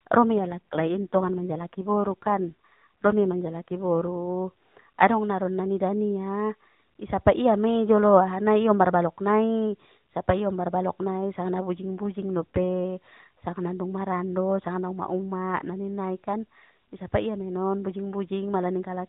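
From 0.38 to 4.12 s, and again from 11.75 to 12.85 s, the speech turns rougher and more synthetic without losing band or dropping out. These are AMR rate drops, which fits the codec stepping down from 12.2 to 5.9 kbps before recovering.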